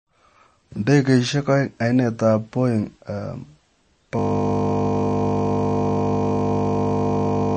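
A speech recording with two faults. Throughout, the sound has a plainly audible watery, swirly quality, and nothing is present above 8.3 kHz. That points most likely to MP3 compression at a low bitrate, consistent with about 32 kbps: the encoder drops weak frequency content that flickers in and out between frames and cuts the treble at a fixed point. On a spectrogram this shows as a hard flat ceiling at 8.3 kHz, with patchy holes and isolated blobs below it where detail has been discarded. From 4.19 s to the end, a system hang loop takes over. The same 20 ms piece of audio repeats exactly, 169 times, because the sound hardware kept cycling one small buffer after the system stopped feeding it. It is heard as a steady buzz at 50 Hz. The waveform shows identical 20 ms cycles, and the spectrogram shows frozen horizontal lines spaced 50 Hz apart.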